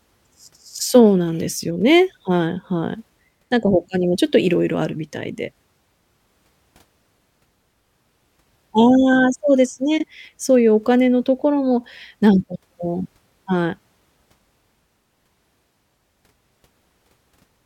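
Speech with one fault, frames out of order: two adjacent frame blocks of about 26 ms each were decoded swapped between 9.98 and 10.04 s, giving a brief garbled flutter.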